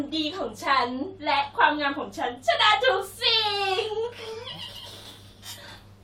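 No technical faults are audible.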